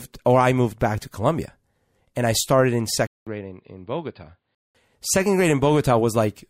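Speech, and it has one problem: from 3.07 s to 4.75 s the sound goes dull and boxy, with nothing above 4.8 kHz, drops by roughly 10 dB, and picks up its own background noise some 55 dB under the speech, then clears up again. There's a 200 ms gap at the switch. That's most likely the input switched to a poorer device, say another mic or a headset's call profile, for that stretch.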